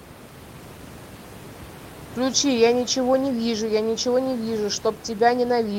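Nothing technical goes wrong in this bit of speech, and the quiet room noise sitting about 17 dB beneath the talking is just the space the microphone was in.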